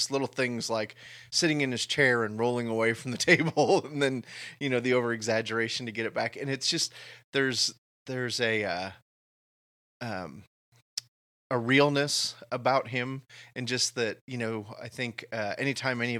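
At 1.05 s, between "little things like" and "sitting in his chair", a brief noisy smear of about 15 ms briefly replaces the speech. This is lost LE Audio frames, which fits two dropped frames. The LC3 decoder filled the gap by repeating the last spectrum with random signs.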